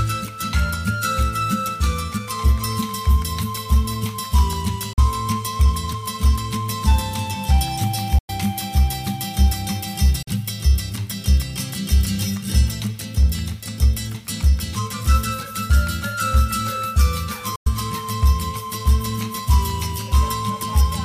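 Four short holes punch through the audio at 4.93, 8.18, 10.22 and 17.56 s, lasting about 44, 102, 44 and 102 ms. Each cuts to silence and picks back up as if the sound kept playing underneath. That pattern is likely a Bluetooth dropout, with a few packets missing their slot.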